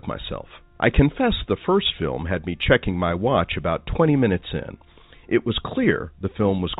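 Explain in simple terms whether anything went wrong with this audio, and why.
Nothing went wrong here.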